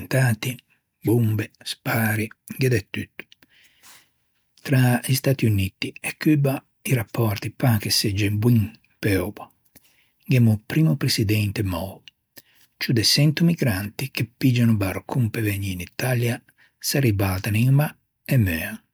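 No technical faults can be heard anywhere in the recording.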